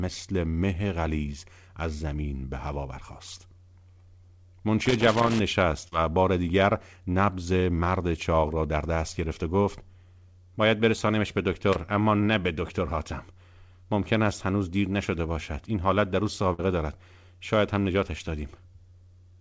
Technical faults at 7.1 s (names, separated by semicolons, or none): none